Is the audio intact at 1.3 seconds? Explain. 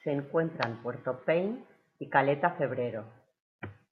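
Yes, the audio is intact at 1.3 seconds, with no fault audible at that moment.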